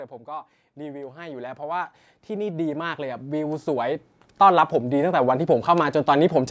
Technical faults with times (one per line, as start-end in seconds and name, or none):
0.24-5.39 automatic gain rising